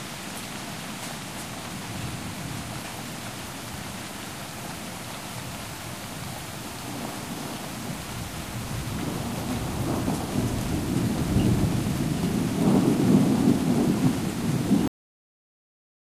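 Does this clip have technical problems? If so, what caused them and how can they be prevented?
Yes. The clip has a cut-off end. The final buffers of audio were never written out or played, so the recording stops abruptly at 14.88 s, in the middle of a sound rather than after it has died away. There is no decay or fade at that point; the audio falls straight to digital silence, which lasts until the end of the clip. To prevent this, flush and close the recording or export stream completely before stopping, so every pending buffer reaches the file.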